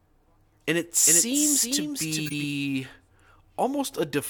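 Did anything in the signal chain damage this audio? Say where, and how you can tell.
Yes. At the codec stage there are two bursts of corrupt frames decoded: a tiny, very faint glitch at 0.90 s, then a much louder glitch of misplaced energy, peaking around -20 dBFS, from 2.26 to 2.34 s. Damaged frames were played anyway, spraying energy into the wrong frequencies.

From 1.06 to 2.44 s there's a doubled audio track: a dry, full-band copy of the speech trailing by roughly 400 ms, about 5 dB down, switching on and off abruptly. No decay or room colour, so it's likely a second capture path or an edit.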